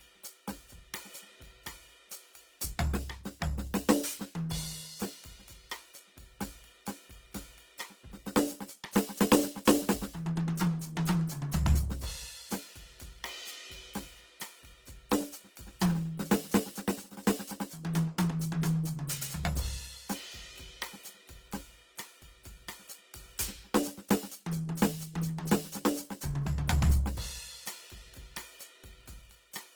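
A music clip with Opus compression damage plainly audible throughout: tones sound grainy and rough, with noise-filled bands, though content still reaches about 20.2 kHz, likely from a very low bitrate, around 16 kbps.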